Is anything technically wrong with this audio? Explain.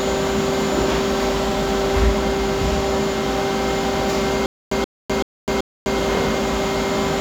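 Yes. Stutter with silent gaps, 4.46 to 5.99 s: likely a stalled stream replaying its last 128 ms fragment four times, each followed by 254 ms of digital silence.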